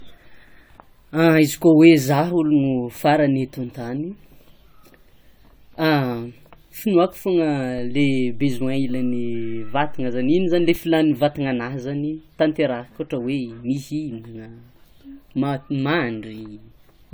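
Throughout the speech there is generation loss: a swirly, hollow smear and softened consonant attacks, worse than one pass at this quality would give. This likely comes from repeated lossy re-encoding, about five passes, with each pass's artefacts stacking. The band still extends to 20 kHz, which fits an AAC chain near 96 kbit/s.

At 7.78 s a DC step shifts the waveform's zero line, heard as a low thump. The offset lasts until 10.76 s. The sound itself carries on unaltered throughout.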